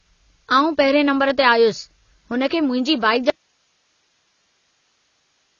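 Heavy AAC compression, likely at a low bitrate near 24 kbps, strips everything above 7 kHz across the whole speech clip, leaving it dull, smeared and plainly warbly. At 1.30 s, just after "पहिरिएं नंबरु", an electrical switching spike, likely a nearby switch arcing onto the line, adds a sharp snap over the speech. From 3.3 s to the end, the signal was likely lost while the path stayed live: an abrupt audio dropout to a faint residue of hiss, far below the speech level.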